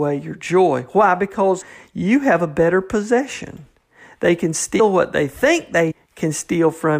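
Compressed frames skipped at 1.60, 4.79 and 5.90–5.92 s. Missing or rejected frames, fitting a 23 ms frame size, make the speech jump ahead by roughly 70, 100 and 150 ms.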